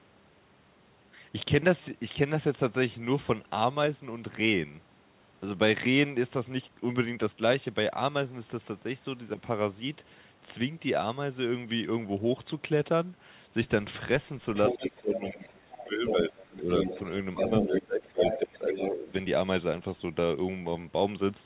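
At 14.55 s a second voice starts leaking through the talker's channel and lasts until 15.56 s, sitting only a little below the talker's level. This is likely the other side's voice leaking through: the far end plays on a loudspeaker and the echo canceller leaves a residue in the microphone signal. At 14.71 s the talker's speech starts dipping in pieces, with the deepest dips around 20 dB and about a second and a half affected in total through 16.68 s. This pattern is likely speech suppressed in double talk, where the canceller cannot separate the near talker from the echo and attenuates both.

The same pair repeats. The leaked voice returns from 16.07 s to 18.77 s at a similar level. From 17.41 s to 19.1 s the talker is again pulled down, by up to roughly 15 dB, over about a second in total. The whole clip is band-limited to 4 kHz, consistent with a narrowband G.711 call path.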